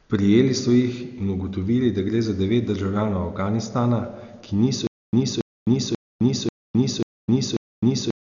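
From the start the speech sounds dull and band-limited, with nothing above 6.9 kHz and rough, fluttering noise around tones, likely heavy Dolby Digital compression at a bitrate near 48 kbps. From 4.87 s to the end, a stutter with silent gaps repeats a 0.28 s burst six times, each followed by 0.26 s of digital silence, a 0.54 s cycle that likely comes from a stalled stream replaying its last fragment.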